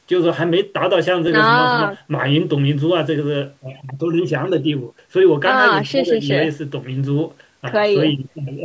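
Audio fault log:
No faults heard anywhere in this speech recording.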